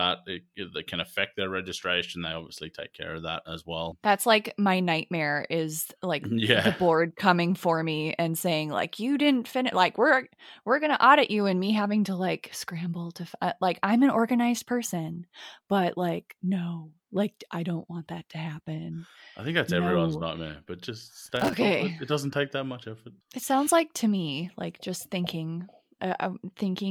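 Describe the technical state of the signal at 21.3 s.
Loose connector crackle runs from 21.26 to 21.54 s, so the moment at 21.3 s falls inside a burst lasting roughly 0.28 s. A worn or dirty contact in the signal path is making and breaking in quick succession, chopping the speech into fragments, while any DC present on the line turns each reconnection into a pop. The result is a short, irregular spray of scratchy crackle over the speech.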